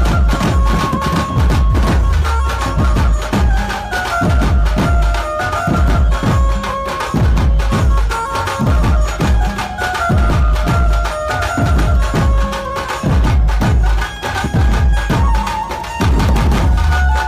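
No technical faults can be heard at any point in the signal.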